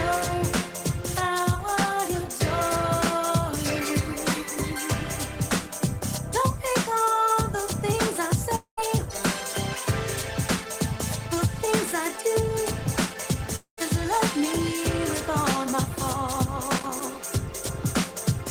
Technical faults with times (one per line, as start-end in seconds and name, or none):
8.55-8.79 long network dropout
13.56-13.79 long network dropout
16.71-17.35 loose connector crackle